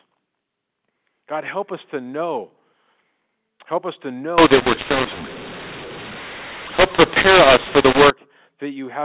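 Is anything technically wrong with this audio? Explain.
Yes. From 4.38 to 8.10 s, mu-law and A-law are mixed up: mu-law G.711 samples get decoded as A-law. The wrong expansion curve scrambles levels, making the speech harsh and distorted and filling pauses with noise, while the rest stays ordinary 8 kHz mu-law telephone audio.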